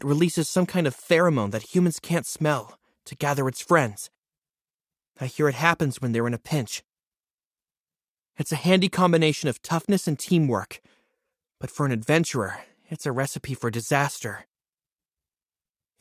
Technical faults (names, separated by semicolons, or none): none